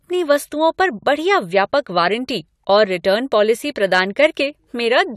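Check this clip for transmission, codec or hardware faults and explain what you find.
One fault appears in this speech clip: hard clipping from 3.95 to 4.26 s. The signal overdrives a stage by about 2 dB, so peaks are cut flat, adding high harmonics heard as brief crackle. The waveform shows squared-off tops; the spectrogram shows broadband smearing above the speech.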